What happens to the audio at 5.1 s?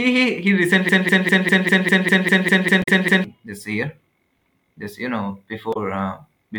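At 5.1 s the speech carries on intact, with no dropout, click, distortion or other fault at that point.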